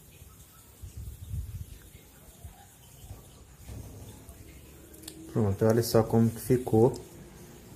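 Nothing goes wrong anywhere in the clip; there's no glitch or dropout to point to at any moment.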